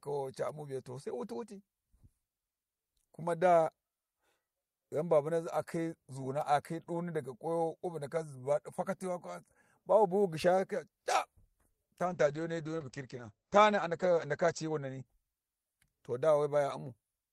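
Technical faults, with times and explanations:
12.07 to 15.59 s, call bitrate drop. The encoder gets far fewer bits, and the speech turns coarse and watery. The top end narrows from 20 kHz to 8 kHz, which fits a fall from 32 to 12 kbps. The worst stretch lasts 2.2 s before recovering.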